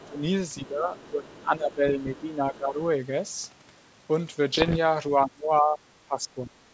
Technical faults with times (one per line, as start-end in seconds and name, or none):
0.00-0.08 other side's voice leaking through
0.05-0.22 speech suppressed in double talk
0.57-0.66 other side's voice leaking through
0.66-2.80 speech suppressed in double talk
0.99-1.31 other side's voice leaking through
1.88-2.21 other side's voice leaking through
4.54-4.78 bit errors on an ADPCM link
5.25-6.61 speech suppressed in double talk